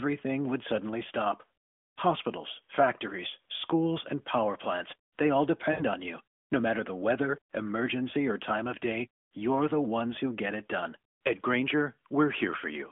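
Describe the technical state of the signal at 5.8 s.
Lost AMR speech frames: radio errors corrupted a run of about 80 ms, fitting four 20 ms frames, so the narrowband decoder replayed its last good pitch and vocal tract settings at falling gain. From 5.72 to 5.85 s, just after "power plants they all", the sound smears and fades, then returns briefly weak or rough before "on you".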